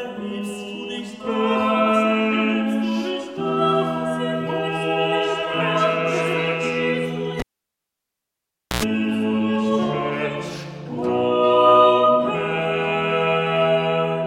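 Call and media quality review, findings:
Pop, then near silence 7.40–8.83 s, short 60 Hz mains buzz burst (about 93 ms), second pop on return. Cable pulled and plugged in: live connector unplugged about 1.39 s, tip-only contact hums.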